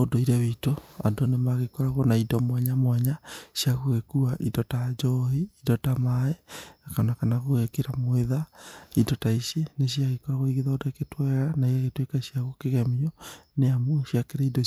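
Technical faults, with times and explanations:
No technical faults can be heard anywhere in this speech recording. There is nothing here to time or explain.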